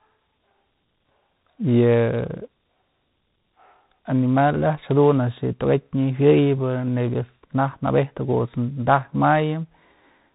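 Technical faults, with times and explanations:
Throughout, tandem speech coding: the speech passes through two speech coders in a row, first CVSD and then G.726, with a G.711 link between them. Each coder re-encodes the previous one's errors. The result sounds rough and noisy, and nothing remains above about 3.8 kHz.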